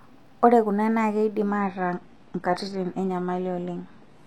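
An adaptive stream at a lower bitrate takes over at 1.59 s and lasts to the end. The connection slowed, so the speech switches abruptly, with no gap, to a duller sound with nothing above 12.3 kHz. This fits a fall from 96 kbit/s AAC to 16 kbit/s HE-AAC.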